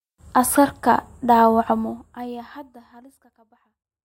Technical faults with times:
none

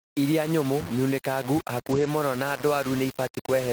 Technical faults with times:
0.00-3.73 low bit depth without dither
1.91-2.05 lost packet rebuilt from error correction

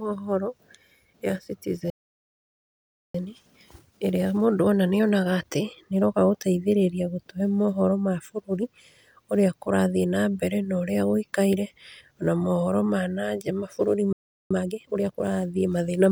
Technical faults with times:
1.90-3.15 playback stall
3.15-6.15 time-compressed catch-up
14.13-14.51 playback stall
14.51-15.25 time-compressed catch-up

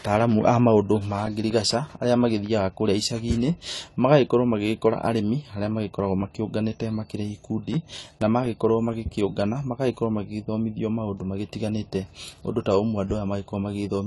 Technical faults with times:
0.00-14.07 AAC compression
0.31-2.46 CD scratch ticks
6.78-9.41 CD scratch ticks

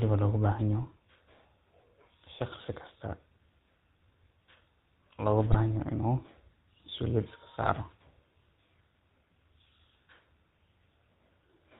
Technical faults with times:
0.00-11.79 GSM full-rate codec
5.51-5.58 GSM bit errors
7.62-7.71 GSM bit errors

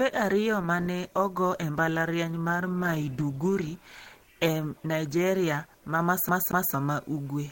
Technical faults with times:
0.00-6.00 adaptive stream starting at a low bitrate
6.29-6.74 CD stuck on one turn

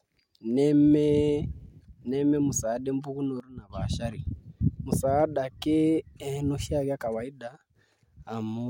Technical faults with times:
3.40-3.70 sudden gain jump
7.48-7.76 sudden gain jump

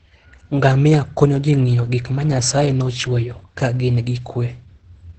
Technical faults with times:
0.00-5.18 Opus voice compression

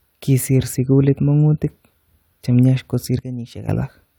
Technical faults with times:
3.19-3.69 sudden gain jump

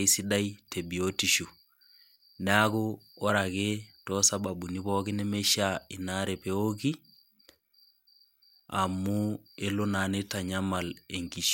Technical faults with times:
none

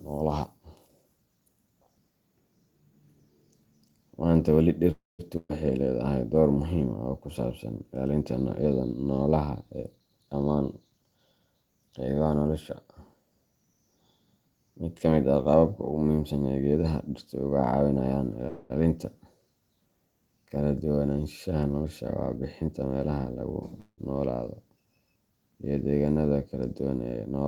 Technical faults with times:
4.91-5.21 call audio freeze
5.37-5.51 burst of packet loss
9.97-11.41 jitter buffer speed-up
18.47-18.72 call audio freeze
21.81-23.44 jitter buffer speed-up
23.80-24.00 call audio freeze

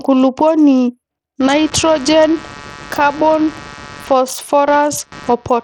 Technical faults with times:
0.00-5.64 Bluetooth SBC compression
1.40-5.64 computer activity noise

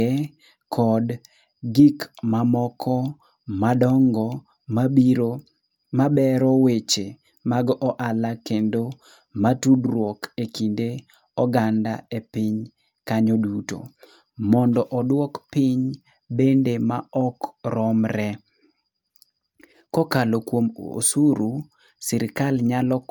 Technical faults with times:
0.00-23.10 generation loss

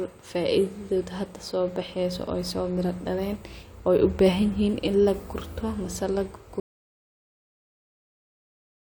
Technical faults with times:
6.60-8.92 audio dropout to silence

